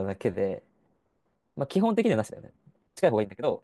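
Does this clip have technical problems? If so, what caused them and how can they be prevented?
Yes. A time-stretched section runs from 1.80 s to the end, where speech suddenly rushes at about 1.63 times its pace without rising in pitch, likely from software dropping short slices to shorten it. Preventing this means re-editing or re-recording to the needed length rather than squeezing the audio to fit.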